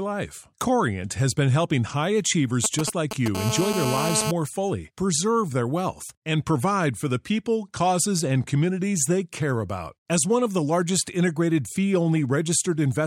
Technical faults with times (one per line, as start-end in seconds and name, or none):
2.64-3.37 GSM signalling bursts
3.37-4.31 GSM phone buzz